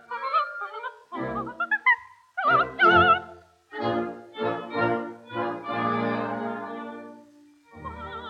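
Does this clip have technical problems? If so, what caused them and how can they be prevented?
No, nothing in this clip stood out as a technical problem on listening, so there is nothing here that needs preventing.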